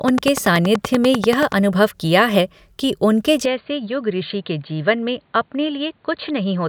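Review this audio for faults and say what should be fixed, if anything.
From 0.08 to 1.53 s a train of clicks ticks over the speech at a steady 10.4 per second, around fifteen sharp pops that peak roughly 10 dB above the voice and carry on through the gaps between syllables. Pulses this alike and this regular point to electrical interference, likely from nearby equipment or a faulty connection or power supply. Moving the interface and cables away from other gear, or fixing the faulty connection, should stop it.

Right after "कि उनके", at 3.45 s, the input switched to a poorer device with no gap at the switch. The speech turns dull and boxy for the rest of the clip because nothing above 4.6 kHz gets through, and it drops by about 5 dB. A new noise floor also sits roughly 40 dB under the voice. The likely cause is the system changing microphones, or a headset dropping into its narrowband call profile. 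Locking the input device for the whole session would prevent it.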